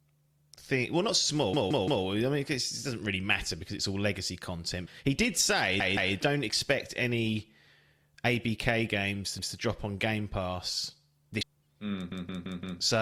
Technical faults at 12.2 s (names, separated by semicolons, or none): repeated buffer